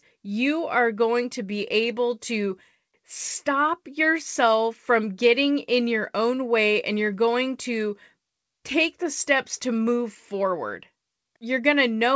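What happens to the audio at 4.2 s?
Nothing goes wrong at 4.2 s: the speech passes through intact, carrying only the ordinary band limit of the call path, with nothing above 8 kHz.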